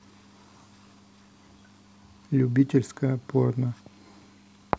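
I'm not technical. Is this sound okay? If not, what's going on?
Yes, nothing in this recording points to a technical problem with the signal itself.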